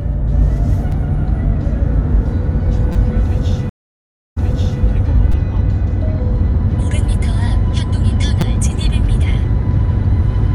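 At 0.92 s, 2.93 to 2.95 s, 5.32 s and 8.41 s, repeated buffers occur. Fresh audio arrived late, so the player replayed its last block of about 5.8 ms, which fits a 256-sample buffer. The block repeats once, four times, three times and twice respectively. Each repeat is a hard-joined click or brief buzz rather than a gap, and only a few milliseconds to a couple of hundredths of a second of audio are lost.

Between 3.69 and 4.83 s, a stream reconnect occurs. The connection dropped, leaving 670 ms of silence, and a new decoder then picked up the stream about 0.46 s earlier than where it broke off, so a stretch just heard plays again. Unlike the buffer stutters, this has a real silent gap and a longer replay.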